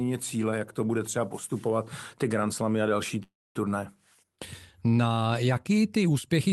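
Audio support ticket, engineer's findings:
Call audio freeze, 3.23–3.57 s, right after "a další". A buzzy or hissy continuation of the last sound fades into about 0.23 s of near-silence, then speech resumes exactly where it stopped. Likely cause: the jitter buffer ran empty while packets were delayed. Unlike packet loss, no speech is missing. About 0.32 s is inserted, and call delay grows by that amount. Opus band-limit near 12 kHz throughout.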